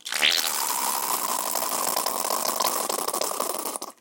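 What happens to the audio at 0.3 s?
Nothing goes wrong at 0.3 s; the audio plays through that moment intact, with no dropout, click or distortion.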